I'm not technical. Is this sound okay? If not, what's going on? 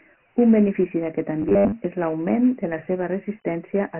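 No. The whole clip has Dialogic VOX ADPCM damage, the coarse format used by phone menus and voicemail. Nothing above 3 kHz survives, so the speech sounds muffled, and a gritty hiss rides along with it. Unlike steady background noise, that grit comes and goes with the speech.

From 1.42 to 1.75 s there is robotic sound from repeated short buffers. The speech turns into a rigid metallic buzz at 100 Hz. The likely cause is the playback repeating a 10 ms scrap over and over while new audio arrives late, with roughly half of it repeated. Unlike a dropout, the sound never goes silent.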